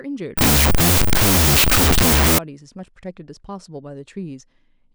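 From 0.38 to 2.38 s the speech collapses into loud noise, with the original buried beneath at half speed and lower pitch. It is a wrong sample width: 16-bit integer data read as unsigned 8-bit, so every byte becomes a sample and only high bytes keep the signal.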